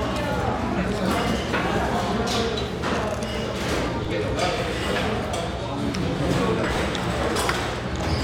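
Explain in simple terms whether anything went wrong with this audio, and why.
A DC step at about 4.05 s is the one thing that went wrong. At that instant the waveform's resting level suddenly shifts away from its usual centre, as if the baseline were knocked sideways. That abrupt jump comes through as a short, low thump or click, while the sound itself carries on unchanged. A filter removing everything below 20 Hz then gradually pulls the baseline back to centre, so the offset fades away instead of lingering.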